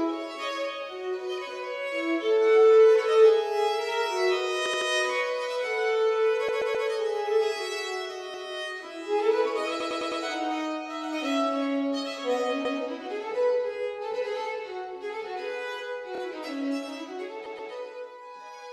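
Repeated frames: short runs of compressed frames were sent again and replayed, stuttering the audio at 4.65, 6.48, 8.34, 9.80, 12.65, 16.15 and 17.45 s, each repeat audibly re-looping.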